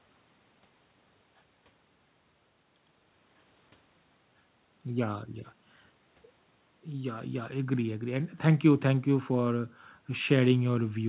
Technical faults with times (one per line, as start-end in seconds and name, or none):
none